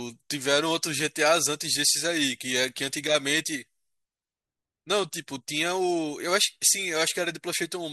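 No technical faults can be heard anywhere in this recording.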